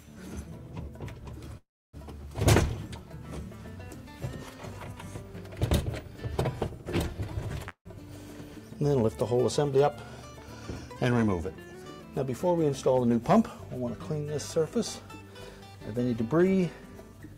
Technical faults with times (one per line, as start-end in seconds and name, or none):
1.57-1.96 call audio freeze
7.69-7.88 call audio freeze
12.72-13.85 jitter buffer speed-up
15.93-17.35 jitter buffer speed-up